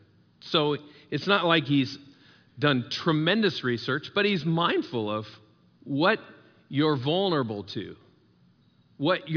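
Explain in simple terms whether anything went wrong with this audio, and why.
Nothing went wrong with this speech recording, and there is no technical fault to point to at any moment. Listening through it, there is simply nothing that signals a problem.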